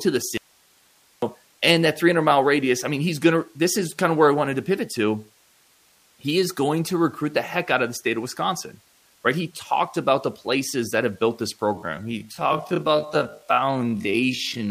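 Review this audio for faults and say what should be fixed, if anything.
An audio dropout to a faint residue runs from 0.37 to 1.22 s. For about 0.85 s the speech drops abruptly to hiss roughly 35 dB down, likely a break upstream while the later path stayed live. Unlike a pause or fade, the cut is instant. Monitor input connections and buffers during recording.

A time-stretched section runs from 11.71 s to the end. The speech plays at about half speed with its pitch unchanged, so it drags rather than sounding deepened. Avoid forcing recordings to fit a fixed length.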